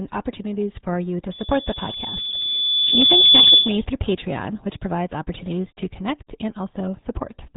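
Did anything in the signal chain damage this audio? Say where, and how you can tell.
Yes, at the codec stage, and it's there for the whole clip. It sounds like the RealAudio 14.4 codec, the old RealAudio 1 dial-up speech coder. Nothing gets through above about 3.9 kHz, so the speech is dull and muffled, and it has that gargly, watery texture from heavy coding damage. A coder that starved has to drop most of the spectrum and rebuild the rest crudely, which points to a bitrate of around 8 kbit/s.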